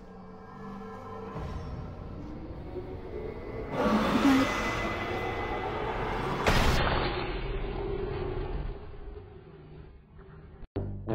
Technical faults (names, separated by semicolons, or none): adaptive stream at a lower bitrate